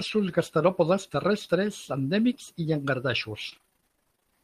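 From 3.49 s to 4.41 s the speech breaks into repeated packet loss (robotic sound). Gaps of up to 24 ms recur so often that nearly half the span is patched by repeating earlier sound, giving a choppy tone. A spectrogram shows striped, smeared harmonics and the waveform looks stuttery.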